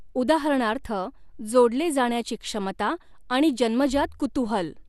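MP2 compression, most likely, affects the speech from start to finish. The sound is dull, with nothing above 12.1 kHz, and carries a plainly audible gurgling, granular roughness. The encoder divides the spectrum into 32 equal sub-bands and shares out too few bits, so the top bands are dropped entirely and the remaining ones flicker and are coarsely quantised. The degree of damage points to a low bitrate, something like 80 kbps.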